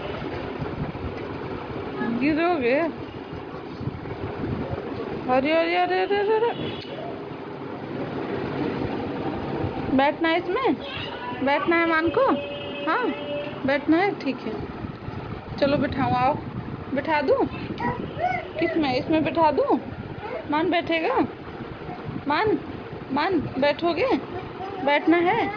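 No technical faults are audible anywhere in the recording.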